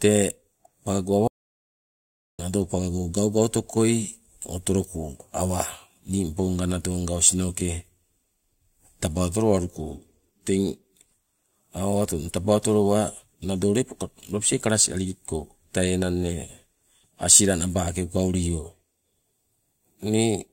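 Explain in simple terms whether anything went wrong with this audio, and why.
At 1.28 seconds the speech cuts out completely, then returns at 2.39 seconds. That is an audio dropout to silence, about 1.1 seconds long. Even the room background vanishes. The input was likely lost briefly while recording continued, so that speech is gone.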